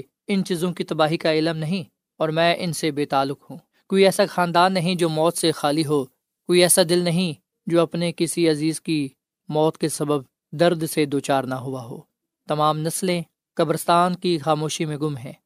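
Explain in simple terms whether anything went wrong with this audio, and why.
Between about 4.94 and 6.94 seconds the speech suddenly turns thin and bright, with the hiss of the s sounds standing out sharply. That's pre-emphasis left on. The treble gets deliberately lifted before recording so it survives the trip, and the playback side is supposed to pull it back down. Here that second step never happened for those two seconds. The shape of the lift fits the kind used on some CDs.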